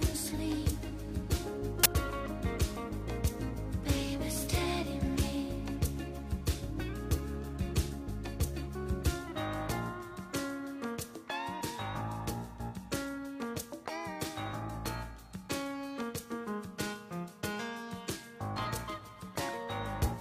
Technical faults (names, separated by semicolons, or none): uninitialised buffer